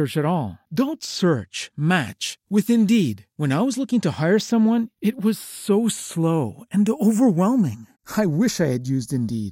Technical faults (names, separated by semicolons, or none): channels drifting apart